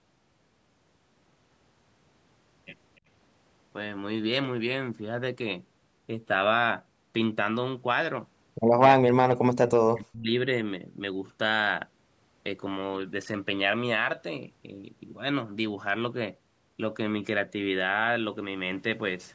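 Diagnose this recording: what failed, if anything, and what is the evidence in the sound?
The speech dips sharply between 9.05 and 10.35 s, losing level and breaking up in pieces for roughly a second in total, with the deepest drop around 40 dB. This pattern points to speech suppressed in double talk in the call processing stage, likely because the echo canceller confused this talker with loudspeaker echo while the far end was also speaking, and turned both down together.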